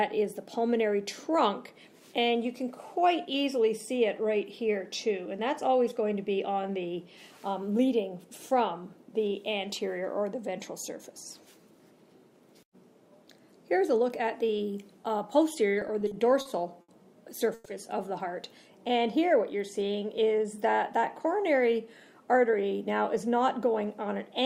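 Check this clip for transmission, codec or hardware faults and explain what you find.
Three transmission faults turn up, all in the later part of the clip, between about 15.7 s and 20.5 s.

From 15.73 s to 16.91 s the audio drags and stutters in a run of repeated stalls (stutter). There are seven short holds, the longest about 70 ms, together 190 ms, roughly 16% of that stretch. During each hold the last sound is stretched out rather than lost, so nothing is missing. Packets kept arriving late or slower than playback, emptying the jitter buffer again and again, and the receiver filled each wait by continuing what it last had.

At 17.54 to 17.68 s the sound briefly hangs for 110 ms as a continued buzz or hiss, without dropping to silence, then resumes exactly where it stopped. This is a call audio freeze, likely from packets held up in transit so the jitter buffer ran dry. The receiver bridged the wait with concealment, so the audio now sits 110 ms later than before while nothing was skipped.

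From 19.82 s to 20.45 s the audio sounds hurried, running at 112% speed while the pitch stays the same. This is a jitter buffer speed-up. The buffer held more audio than its target, so the receiver trimmed many short pieces of one or a few pitch periods in succession, about 70 ms in all, to catch up and reduce the added delay.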